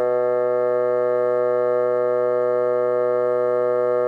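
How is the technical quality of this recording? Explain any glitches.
No glitches or technical faults are audible here.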